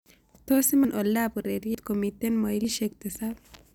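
Speech, with audio missing between chunks: the recorder likely drops roughly a tenth of a second at each 1-second chunk boundary, so abrupt skips appear at 0.85, 1.75 and 2.65 s.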